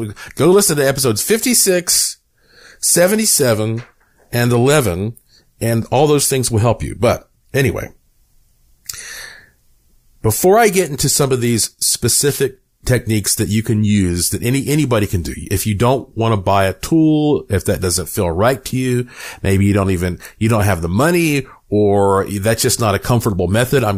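At 3.39–3.43 s, and at 12.26–12.42 s between "into some of these" and "techniques that you can", wireless microphone noise hits appear as brief static bursts where the FM radio link faded and receiver noise briefly rose.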